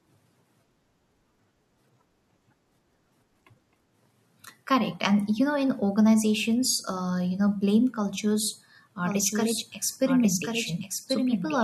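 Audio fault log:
9.01–11.64 s, doubled audio track: A second copy of the speech cuts in abruptly at 9.01 s and runs to the end. It trails by about one second, roughly 5 dB quieter, full-band and dry. The likely cause is a second, slower capture path mixed in.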